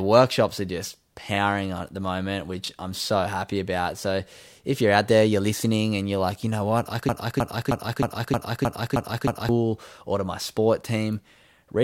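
At 1.34–1.38 s, after "workshops are just", and again at 2.64–2.68 s, after "on at the moment", the audio briefly jumbles. These are chunks out of order: a 20 ms chunk arrived one chunk late and plays after its successor. From 7.09 to 9.49 s, after "you know what I", a 312 ms fragment repeats eight times back to back in a broken-record loop until "or to my" resumes. A stalled stream likely kept resending its last buffered piece, and the audio for that span is lost.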